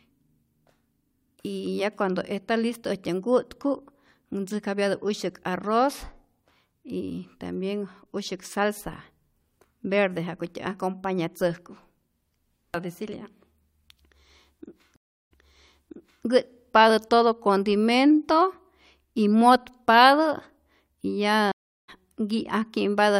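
Speech with two stream reconnects: at 14.96 s the audio drops out for about 345 ms and resumes 0.94 s earlier, repeating material; at 21.52 s a 365 ms silence resumes roughly 0.3 s later, skipping content.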